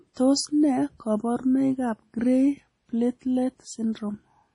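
MP3 compression damage runs through the whole recording, from start to end. Nothing is heard above about 10.6 kHz. The treble stops at that fixed point, and the damage is heavy, which fits a low bitrate of around 32 kbps. The likely cause is an encoder starved of bits that discards weak frequency lines. Those lines drop in and out between frames, giving the speech a watery, swirling texture, with metallic chirps on sibilants and smeared onsets.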